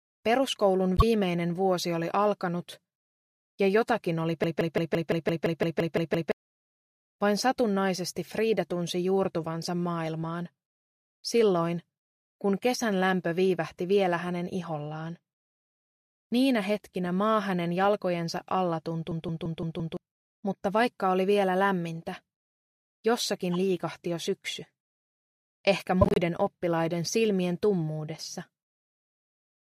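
A short chirp-like burst at 0.97 to 1.03 s is a corrupt frame decoded: a couple of compressed frames arrived with flipped bits and were played anyway, so misread gains and codes threw energy onto the wrong frequencies for their duration.

From 4.44 to 6.32 s, a machine-gun stutter repeats the same 171 ms fragment 11 times at about 5.86 Hz. This is a system hang loop: the host froze while the audio hardware kept replaying its ring buffer, which fits an 8192-sample buffer. Around two seconds of audio are lost.

The same system hang loop returns from 19.12 to 19.97 s, with the same 171 ms fragment repeating 5 times at 5.86 Hz. Roughly a second of audio is missing.

Corrupt frame decoded faults recur as a brief blip at 23.53 to 23.55 s and a longer squeaky noise burst at 26.01 to 26.18 s. Each time, damaged frames decoded with wrong parameters misplace energy across the spectrum, and the second burst spans several frames.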